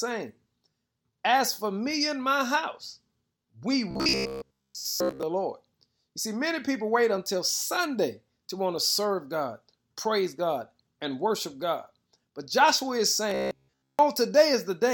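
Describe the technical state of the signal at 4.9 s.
Robotic sound from repeated short buffers runs from 3.91 to 5.23 s, likely from a short slice of about 15 ms replaying in place of most of the incoming audio, forcing a rigid, metallic 66.7 Hz buzz.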